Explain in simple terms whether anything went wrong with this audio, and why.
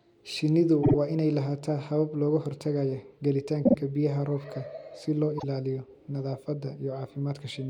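Something did go wrong: repeated frames. At 0.82 s, just before "waa inay lahaataa habab", then at 3.65 s, and at 5.37 s, right after "si loo", a split second of speech plays again, giving a brief stutter. Unlike a dropout, nothing is lost. The clip simply gets longer.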